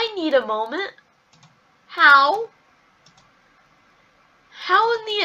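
No audible faults anywhere in the audio.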